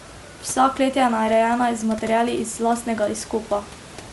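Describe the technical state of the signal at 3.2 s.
At 3.2 s the speech has a breathy, grainy edge, with the upper range sounding hissy rather than crisp. The damage is plainly audible and runs through the whole clip, not just this moment. The likely cause is Bluetooth LC3 compression. The codec's short-frame transform discards much of the high-frequency detail and fills the gap with noise, and the character points to roughly 48 kbps with 7.5 ms frames. Room noise sits about 19 dB below the speech.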